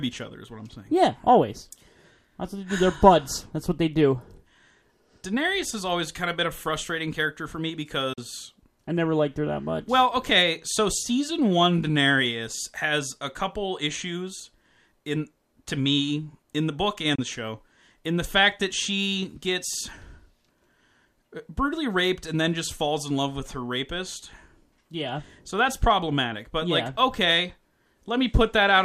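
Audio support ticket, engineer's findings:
Bluetooth dropout, 8.13–8.18 s and 17.15–17.19 s: brief silences of about 50 ms and 37 ms, abrupt or with a few-millisecond fade. Speech resumes further along, as if it played through the gap. Likely late packets on the wireless link to the headphones, dropped rather than played.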